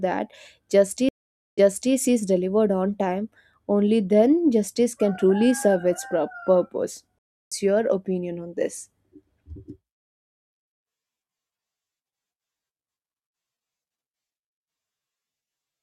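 At 1.09 to 1.94 s and 7.19 to 7.52 s, the speech drops out (0.49 s, then 0.32 s), resuming 0.36 s earlier before "is delivered on time" and about a fifth of a second later before "your opinion on this". Each is a stream reconnect restarting the decoder mid-stream.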